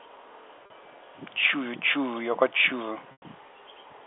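At 0.66 s the sound holds briefly, slightly buzzy, for 40 ms. This is packet loss with pitch repetition. The receiver loops the last pitch period to fill the gap. At 3.12 s a 100 ms loss fades to silence, then cross-fades back.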